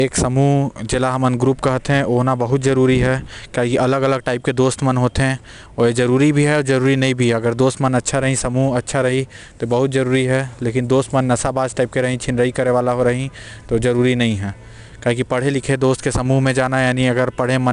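Throughout the speech, 4-bit ADPCM compression leaves gritty hiss tracking every loud passage; spectrograms show level-following broadband noise with nothing above 10.6 kHz, fitting an 88 kbps stream.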